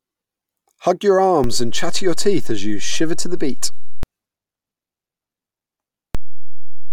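At 1.44 s a DC step shifts the zero line of this speech by about -11 dBFS, thumping on and again at 4.03 s; another, about -9 dBFS, holds from 6.15 s to the end. On a waveform the trace sits visibly off-centre, and on a spectrogram each edge shows a low-frequency smudge.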